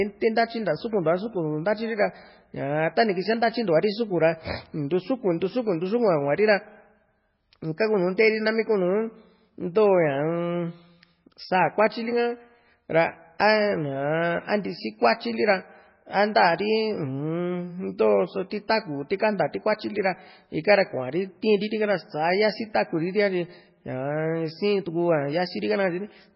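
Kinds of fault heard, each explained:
MP3 compression: The speech runs through the whole clip with nothing above about 5.5 kHz, so sibilants and breath lose their top and sound dull and lisping. The damage is heavy, with a watery, swirling quality as weak spectral detail flickers in and out between frames, and consonant onsets smear. That points to a very low bitrate, likely around 16 kbps. A simple low-pass filter would dull the top just the same but leave the remaining band clean, with none of this swirl.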